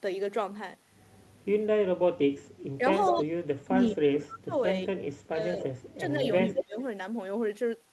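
Speech, with two kinds of fault. The voice dips or cuts out at 1.8–2.17, 2.78–3.27, 3.65–4.55, 5.28–5.61 and 6.17–6.77 s, by up to about 40 dB. This is likely speech suppressed in double talk. A delayed copy of the voice follows about 210 ms late, at 3.07–3.15, 5.61–5.94 and 6.42–6.82 s. The first two are faint, but the last is nearly as loud as the speech. This is likely echo leak from a loudspeaker.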